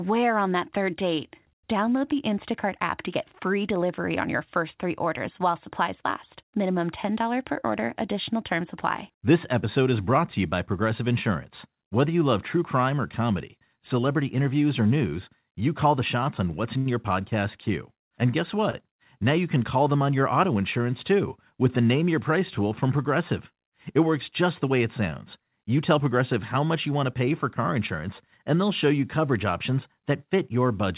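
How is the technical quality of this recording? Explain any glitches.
The recording is speech over a narrowband call line, with nothing above 4 kHz, which fits G.711 mu-law at 64 kbps. Two glitches are audible, both of the same kind.

A short stall from a late packet occurs at 16.78 to 16.88 s and again at 18.70 to 18.75 s. Each time, a packet missed its slot, the jitter buffer ran dry, and the receiver stretched the last sound until the packet arrived, about 75 ms the first time and 26 ms the second. Nothing is lost. Instead, a sound hangs on slightly too long with a faint buzz or dip, and playback resumes a little later than before.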